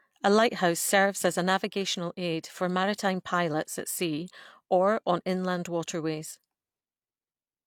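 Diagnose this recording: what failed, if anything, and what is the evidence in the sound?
Nothing in this speech recording points to a failure at any stage of the signal chain. No audible event calls for a diagnosis, so there is no mechanism to trace.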